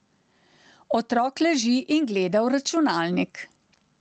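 A speech recording in which the level pumps throughout, with a gain swing of about 10 dB, so loud and quiet passages sit unnaturally close in level and the whole sound feels squashed. This gain pumping likely comes from input gain set far too high, with a fast limiter or compressor clamping down on each peak. The call-codec path, whose top end stops near 8 kHz, adds only its usual coding noise.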